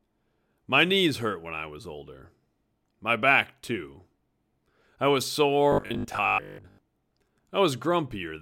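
From 5.72 to 6.78 s, right after "I was", the speech turns into a rigid 50 Hz metallic buzz: robotic sound, likely from repeating a 20 ms buffer in place of most incoming audio.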